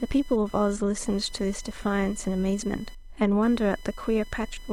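Load changes in the computer are disturbing the audio circuit's shared ground, producing computer activity noise for the whole clip. A buzzy, chirping whine pulsing at around 1 kHz sits roughly 25 dB below the speech, following the machine's activity rather than the talker.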